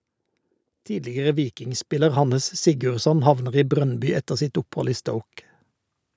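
From 0.87 s to 5.08 s the speech shows automatic gain rising: the level climbs steadily by about 9 dB over roughly four seconds. The gain control judged the input too quiet and kept lifting its amplification, so the voice and the background behind it swell together rather than the speech alone getting louder. The call microphone processing is audible as a spectrum with nothing above 8 kHz.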